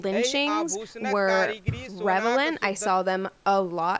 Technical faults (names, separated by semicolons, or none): none